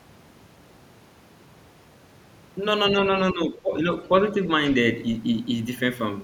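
Audio dropout to silence runs from the very start to 2.57 s: silence with no room tone, likely from an input lost while recording continued. Speech suppressed in double talk follows between 2.94 and 3.9 s, where the talker dips by roughly 10 dB, about half a second in total, likely an echo canceller ducking both sides during overlapping talk.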